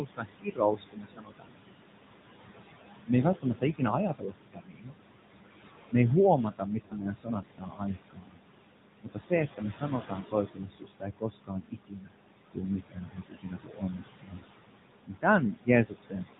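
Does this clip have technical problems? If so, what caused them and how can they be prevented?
Yes. The noise suppressor artifacts run throughout. Steady background is pulled down by about 20 dB between phrases and rises under them. On a spectrogram, the noise floor pumps and breaks into speckled, blotchy patches. Lowering the suppression depth would prevent it.

The AMR narrowband mobile codec also colours the whole clip with audible buzzy, synthetic damage, which fits a mid-rate mode around 10 kbps. A spectrogram shows a hard ceiling at 4 kHz, with smeared, grainy harmonics below it. A wideband codec or a higher rate would prevent this.

Speech cut by the noise suppressor comes in six stretches: 0 to 1.84 s, 3.42 to 4.93 s, 6.51 to 8.42 s, 9.03 to 12.12 s, 12.52 to 14.44 s and 15.07 to 16.28 s. Quiet consonants and word endings are treated as noise and drop by about 21 to 22 dB. The waveform shows tails chopped into the floor. 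Gentler suppression with better speech detection would prevent it. The room noise itself sits about 11 dB under the speech.

Lost AMR speech frames cause a short warbly dip from 1.14 to 1.22 s, which fits one lost 20 ms frame. A longer smeared fade follows from 6.86 to 6.96 s, about 40 ms lost. The decoder is stretching the last good sound with falling gain. A spectrogram shows frozen, fading harmonics. A stronger radio link or error protection would prevent it.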